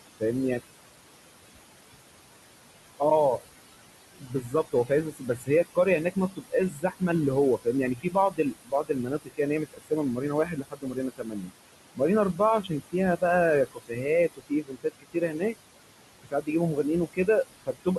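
A speech recording with noise suppressor artifacts throughout. The suppressor pulls the room noise, which sits about 12 dB below the speech, down by about 20 dB whenever it judges a band to be steady noise. The residue pumps between phrases and rises under them. The same processing also causes speech cut by the noise suppressor. It mistakes quiet speech for noise at 4.18–7.02 s, 7.59–11.52 s, 12.33–13.22 s, 13.66–14.05 s, 14.36–15.56 s, 16.22–17.28 s and 17.66–17.87 s. Parts of the speech drop by about 17 to 21 dB and sound swallowed, several seconds in all.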